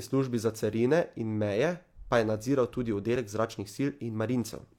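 At about 3.16 to 3.19 s there's a tiny skip where the speech jumps forward, and that's an overlap between stream segments. Two chunks of the stream claimed the same stretch of time, so the player trimmed the overlap away, except that audio wasn't actually duplicated. Roughly 25 ms of real speech just vanishes and the waveform jumps across the gap. The stream was cut into 4-second segments.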